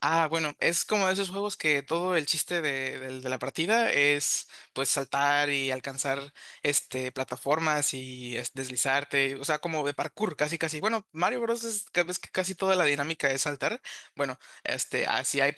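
No technical faults can be heard in this speech.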